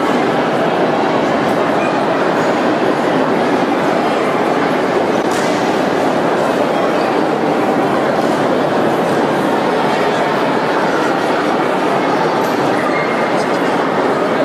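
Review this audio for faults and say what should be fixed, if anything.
At 5.21 to 5.24 s the decoder was likely left with a broken MP3 bit reservoir: frames were lost from the stream, so the frame after the gap reached back for borrowed data and read bytes belonging to another frame. The sound jumps ahead and that 30 ms stretch, about one 26 ms frame, comes out as a chirp, a burst of noise or a short hole. Cutting or splicing only at points where the reservoir is empty, or re-encoding after an edit, would prevent it.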